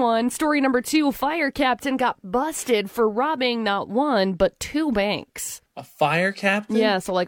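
No technical faults occur at any point in this speech recording, so there are none to describe in time order.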